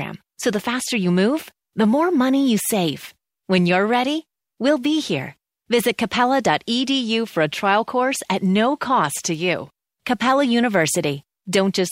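No technical fault can be heard anywhere in the speech recording. Nothing in the audio calls for comment on technical grounds.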